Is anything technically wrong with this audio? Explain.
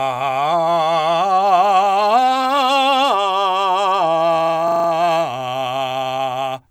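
Yes. A system hang loop at 4.68 to 4.88 s: the system froze while hardware replayed one 40 ms slice of music five times, a 25 Hz buzz.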